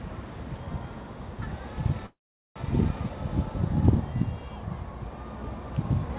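A recording of everyday sounds, carried over a call link that cuts everything above 4 kHz, consistent with G.711. From 2.06 to 2.58 s there is a call audio freeze. A brief fading tail gives way to about 410 ms of silence, likely from delayed packets emptying the jitter buffer. The sound then resumes where it stopped, with nothing lost.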